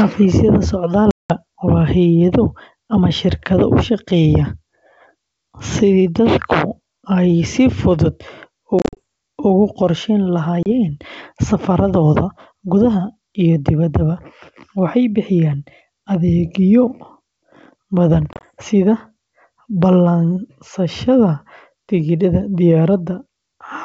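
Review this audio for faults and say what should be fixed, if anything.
Packet loss on an ADPCM call appears at 1.11–1.31 s (190 ms lost), 8.79–8.99 s (120 ms in short gaps), 10.63–10.67 s (30 ms) and 18.33–18.44 s (70 ms scattered). These are hard-edged silences, shown as flat waveform gaps and full-height blank columns on a spectrogram. Afterwards the decoder's predictor and step size are out of step, so speech returns slightly distorted until it settles. Packet-loss concealment with a decoder-state reset after gaps would prevent this.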